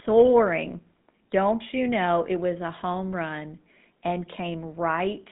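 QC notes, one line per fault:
Throughout: GSM full-rate codec, bandwidth limited to roughly 150 Hz–3.6 kHz, nothing above 3.8 kHz; pulse-excited vocal-tract model gives plainly audible buzzy, gravelly roughness, consistent with 13 kbps.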